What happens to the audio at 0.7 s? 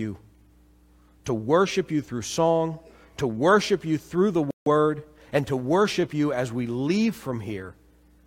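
Nothing goes wrong at 0.7 s: the speech there plays through intact, with no dropout, click, distortion or other fault.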